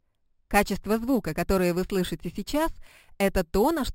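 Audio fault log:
Throughout: imaging from sample-and-hold upsampling. There's a bright, metallic fizz riding on top of everything, rising and falling with the level of the sound, and it sits about 19 dB down from the signal. It's mirror images of the spectrum: the lowest copy fills the 6 to 12 kHz band, which fits audio at a 12 kHz rate being raised to 44.1 kHz by repeating each sample, with no smoothing filter to knock those copies out.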